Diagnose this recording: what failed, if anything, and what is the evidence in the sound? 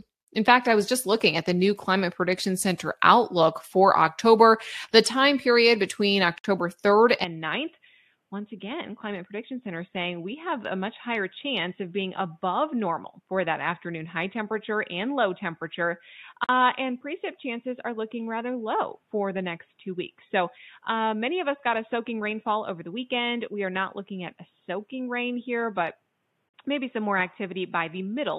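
Short silences cut the speech at 6.38 s (61 ms, just after "the time period between"), 16.44 s and 26.49 s (48 ms each). This is a codec-stage gap at a join of encoded pieces, from untrimmed encoder delay every 10 s.

From 7.24 s the speech turns dull and quieter, about 10 dB down, with nothing above 3.8 kHz and new noise about 45 dB below. The input likely switched to a poorer device.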